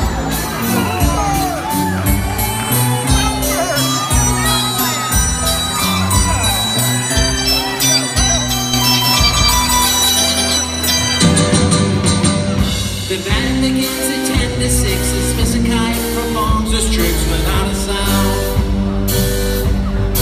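From 8.74 to 10.58 s the audio carries a doubled audio track: a second, equally loud copy trails about 200 ms behind, likely from a slower second capture path. A spectrogram shows every feature repeated 0.2 s later, starting and stopping abruptly with no decay.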